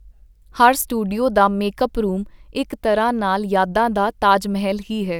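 Speech clip. At 0.82 s there is a block of digital silence. A 4 ms run of samples drops out without fading, so it is heard as a tick.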